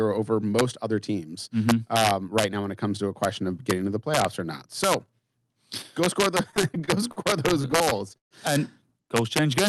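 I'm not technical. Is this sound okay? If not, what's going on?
No. Throughout the speech, the loudest moments break into harsh, sharp cracks. This is integer overflow: those peaks went past the largest number the audio could hold and flipped to the opposite extreme instead of being capped.

From 6.51 to 8.34 s, right after "go score the", the speech drags and stutters through many brief stalls, the longest about 0.13 s. These repeated stalls (stutter) happened because the audio arrived late. Nothing was lost, but the sound was stretched to cover each wait.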